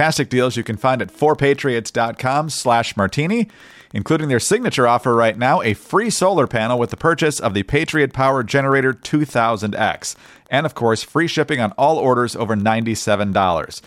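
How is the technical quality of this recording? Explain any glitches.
The recording has a faint tick running under the speech from 0.60 s to the end at 13.86 s. It is Wi-Fi interference: a nearby Wi-Fi radio's beacon, repeating every 102.4 ms, is rectified by the audio circuit. This produces steady ticks about ten times a second, roughly 40 dB below the speech.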